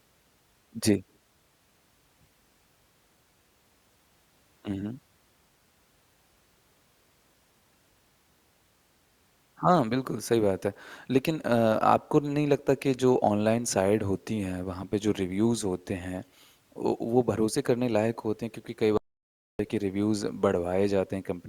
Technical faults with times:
18.97-19.59 audio dropout to silence

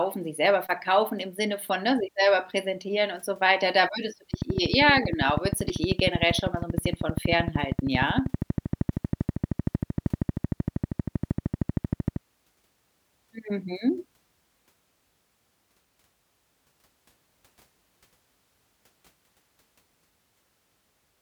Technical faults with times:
4.34-12.17 train of clicks

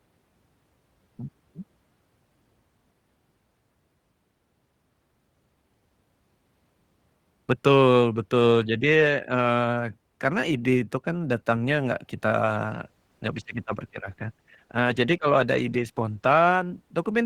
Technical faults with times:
12.67-17.26 call bitrate drop

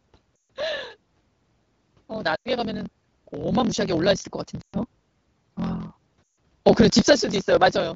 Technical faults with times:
0.00-7.95 block size mismatch (truncated)
0.36-0.46 lost AMR speech frames
2.36-2.48 lost AMR speech frames
4.61-4.76 lost AMR speech frames
6.25-6.37 lost AMR speech frames

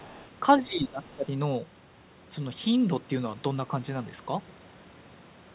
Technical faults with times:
0.00-0.26 other side's voice leaking through
0.56-1.32 speech suppressed in double talk
1.05-1.15 other side's voice leaking through

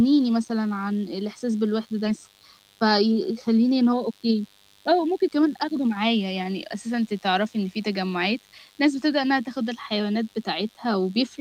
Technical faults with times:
0.00-11.40 mains buzz
2.05-2.07 skip ahead
3.89-5.29 jitter buffer speed-up

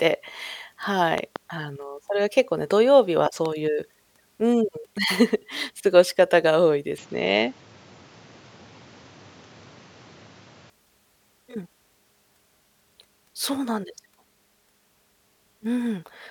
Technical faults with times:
1.18-1.38 loud pop
3.26-3.48 loud pop
6.98-10.70 input switched to a poorer device

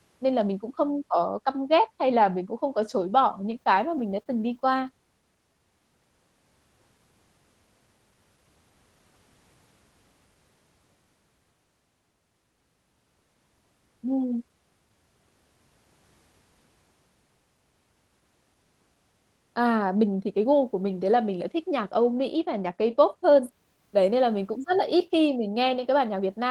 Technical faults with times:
3.51-4.87 repeated stalls (stutter)
19.96-20.45 jitter buffer speed-up

